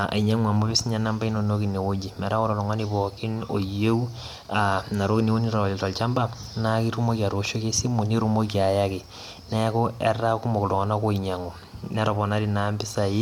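No technical faults occur at any point in the recording, so there is nothing to describe in time order.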